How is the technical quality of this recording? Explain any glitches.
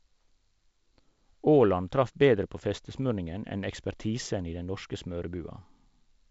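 No glitches or faults can be heard in this speech recording.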